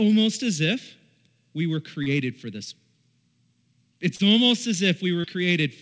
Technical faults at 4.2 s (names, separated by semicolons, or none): short concealed packet loss